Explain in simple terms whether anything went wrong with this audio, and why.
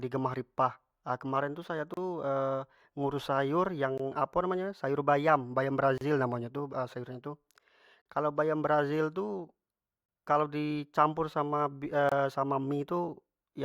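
The stream comes in two-second pieces, and at five of the joins the timing leaves a gap between stream segments, which the player fills with silence. The speech cuts out sharply for roughly 20 to 40 milliseconds at 1.94, 3.98, 5.98, 8.02 and 12.09 seconds. No speech is lost.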